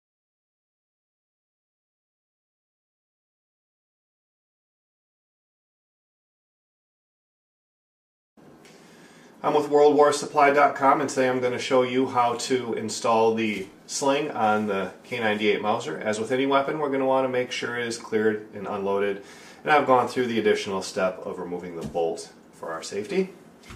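No technical faults can be heard anywhere in the signal.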